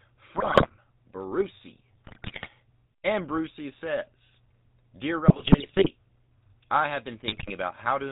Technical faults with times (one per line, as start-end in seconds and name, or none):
0.00-8.11 GSM full-rate codec
0.36-0.72 GSM bit errors
2.06-2.48 GSM bit errors
5.28-5.87 GSM bit errors
7.26-7.53 GSM bit errors